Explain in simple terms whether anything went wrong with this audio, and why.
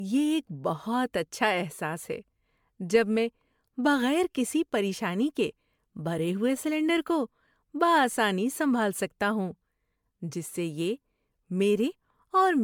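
Throughout, the speech sounds swirly, hollow and smeared, with blurred consonants. This is generation loss, likely from being re-saved as MP3 about seven times.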